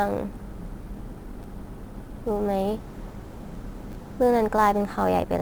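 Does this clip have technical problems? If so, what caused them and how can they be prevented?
Yes, there's sample clock jitter running through the whole clip: the converter's clock wobbles by roughly 10 microseconds, so samples land early or late. That adds a hiss, about 30 dB below the speech, that grows on loud, bright sounds and disappears in pauses. A clean, stable clock source, or an interface with good jitter rejection, prevents it.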